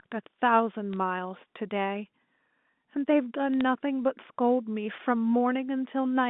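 Bit errors on a digital phone line flip single bits in the G.711 A-law stream at about 0.93 s and again from 3.54 to 3.61 s, around one bit in a thousand. Each corrupted sample jumps off its true value, and hits on high bits produce brief sharp ticks over the band-limited telephone speech.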